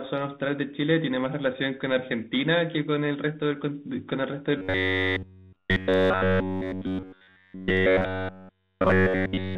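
Throughout, the speech sounds rough and noisy. This is tandem speech coding: CVSD, then G.711 A-law, then CVSD again, each re-coding the last stage's damage.

From 4.58 s to 9.58 s, the sound becomes a rigid, metallic 93.8 Hz buzz. The likely cause is robotic sound from repeated short buffers: starved playback loops a stretch of about 10.7 ms and skips essentially all of the real audio.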